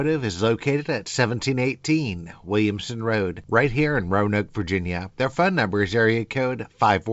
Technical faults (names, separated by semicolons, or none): none